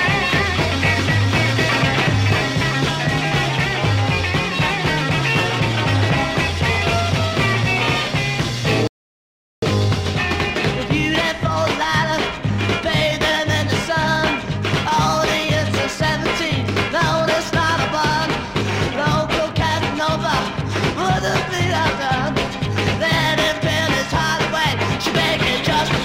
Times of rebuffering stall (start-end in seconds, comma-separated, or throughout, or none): 8.87-9.62